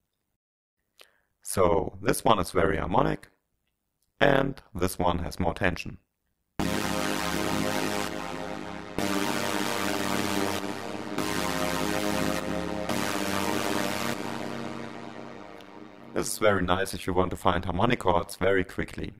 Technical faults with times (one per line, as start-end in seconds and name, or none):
0.00-19.20 overlap-add ripple